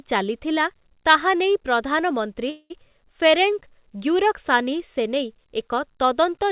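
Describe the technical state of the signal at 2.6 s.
At 2.6 s the speech sits inside a call audio freeze spanning 2.50 to 2.72 s. The last sound is drawn out as a fading buzz, then about 50 ms of near-silence, before speech resumes where it stopped, roughly 200 ms late, with nothing lost. The likely cause is a jitter buffer running empty. A spectrogram shows smeared, repetitive energy capped at 4 kHz fading into a blank strip. The waveform shows a decaying tail, then flatline.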